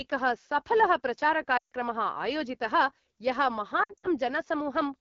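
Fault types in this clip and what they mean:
AMR wideband (HD Voice) codec: The speech sounds rough and raspy throughout, with a hissy, noise-like top end above about 6.4 kHz. The AMR-WB model runs at one of its lowest rates, which fits 8.85 kbit/s, too coarse to carry fine vocal detail.
lost AMR speech frames: Speech drops to near silence from 1.57 to 1.72 s, a solid 140 ms gap, then returns rough. From 3.83 to 4.07 s, brief dips and warbles scatter over 200 ms. Failed frames made the decoder reuse old settings at falling gain.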